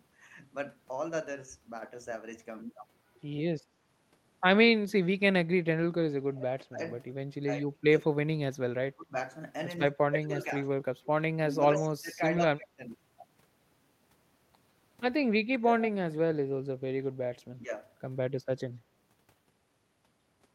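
Speech suppressed in double talk dips the voice at 5.33–6.8, 7.66–8.42, 8.88–9.15, 10.01–10.53, 11.34–12.83, 15.45–15.68 and 17.62–17.72 s, mostly by about 20 to 30 dB but only about 5 dB in the last. An echo canceller likely treated overlapping speech as echo and ducked it. Unlike network dropouts, these dips follow the overlaps. An echo leak appears at 11.75–11.83 s as a brief copy about 146 ms behind, about 10 dB below the voice. It is likely loudspeaker pickup the canceller missed. Its clear delay separates it from room reverberation.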